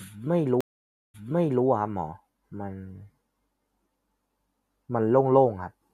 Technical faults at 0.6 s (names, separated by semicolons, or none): stream reconnect